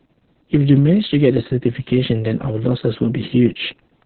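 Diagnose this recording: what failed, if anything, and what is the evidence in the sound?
The codec failed, throughout the whole clip. This is Opus voice compression at a very low rate. Nothing in the speech reaches above about 4.4 kHz, so the voice sounds muffled and narrowband. The excitation is coded coarsely, leaving a hoarse, slightly robotic buzz on every phrase. The damage is heavy and constant, which points to the SILK coder running at roughly 6 kbps, probably with long 60 ms frames.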